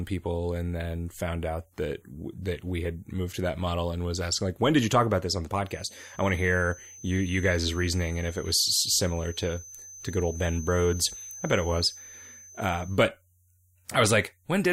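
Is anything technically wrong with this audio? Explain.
Yes. From 5.62 to 13.06 s there's a feedback whistle under the speech, a thin steady tone near 6.2 kHz sitting roughly 20 dB down and swelling and fading slowly in level. Likely a speaker-to-mic loop hovering right at the edge of feedback without tipping over.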